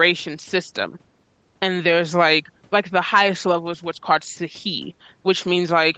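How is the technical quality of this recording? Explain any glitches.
Nothing stood out on listening to this speech recording; the top end stops at about 8 kHz, which fits the call's microphone processing and Opus coding and is normal for a call.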